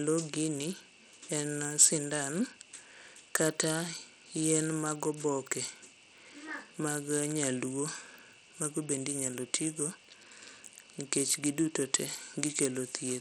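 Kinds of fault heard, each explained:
Bluetooth SBC compression: The audio was likely squeezed through the default Bluetooth codec at a low bitrate, which fits about 80 kbps. Its coarse split into a few wide frequency bands, with no model of hearing to guide the bits, starves the upper bands and roughly quantises the rest. Across the whole speech clip this is plainly audible: the treble thins out and flickers, and a gritty, aliased noise clings to the sound.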